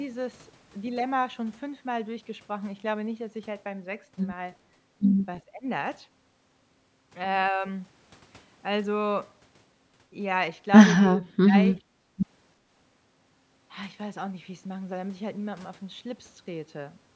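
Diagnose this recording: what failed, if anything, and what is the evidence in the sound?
At the call processing stage, the speech dips by roughly 15 dB between 5.45 and 5.66 s. Between 11.12 and 11.56 s it drops much harder, by around 30 dB. This is likely speech suppressed in double talk: with both ends talking, the echo canceller could not separate the near talker from loudspeaker echo and attenuated everything.

The background is gated by the echo canceller, also within call processing. From 11.86 to 12.17 s the room sound falls by about 15 dB, then returns. The canceller clamped the microphone while the loudspeaker played and released it after roughly a third of a second. The 8 kHz upper limit of the call band is expected.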